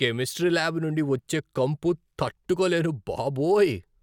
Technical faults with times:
none

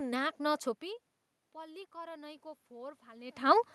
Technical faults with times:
1.37-3.41 automatic gain rising

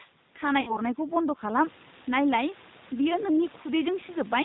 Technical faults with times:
0.00-4.44 G.729 codec
0.61-0.81 VoIP packet loss concealed by the speech codec

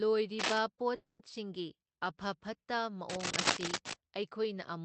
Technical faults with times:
0.39-0.58 cable scratch noise
0.95-1.21 call audio freeze
3.09-3.93 cable scratch noise

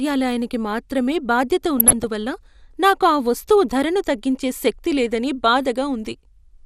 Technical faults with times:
0.00-6.66 MP2 compression
1.79-2.05 DAB burbling

